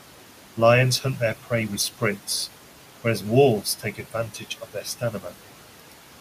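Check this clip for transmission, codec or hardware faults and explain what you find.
What you're hearing is the noise suppressor at work, with two spots where it goes too far.

Noise suppressor artifacts run through the whole clip. The suppressor pulls down whatever bands it reckons are steady noise, frame by frame, by about 12 dB. So the room noise, which sits about 18 dB under the speech, dips in the gaps and swells back under the talking.

Speech cut by the noise suppressor shows up twice, from 3.63 to 4.13 s and again from 4.61 to 5.34 s. Here the suppressor mistook bits of speech for noise and turned them down with the background, by up to about 10 dB. It adds up to about 350 milliseconds across the two stretches, and those softer sounds come out swallowed and faint.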